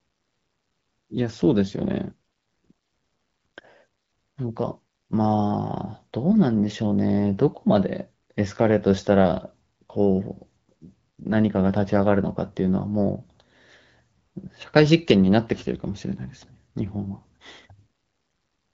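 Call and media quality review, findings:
No faults found: the speech carries only the light coding texture expected of the AMR wideband (HD Voice) path at 12.65 kbit/s, with no level, timing or band-limiting problems.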